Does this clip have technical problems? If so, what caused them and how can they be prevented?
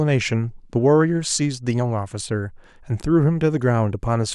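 No, nothing in this recording stood out as a technical problem on listening, so there is nothing here that needs preventing.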